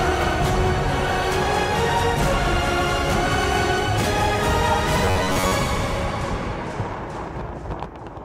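From 5.05 to 5.52 s the sound collapses into a rigid, metallic buzz at 93.8 Hz: robotic sound from repeated short buffers, likely from starved playback looping a roughly 10.7 ms chunk over about half the audio. Unlike steady mains hum, the buzz loosely tracks the underlying sound.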